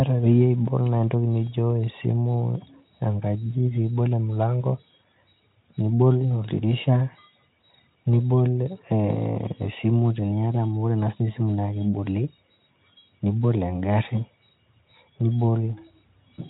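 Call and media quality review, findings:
No faults found in this speech recording. The Speex codec path at 18.2 kbps shows no audible or only faint coding damage.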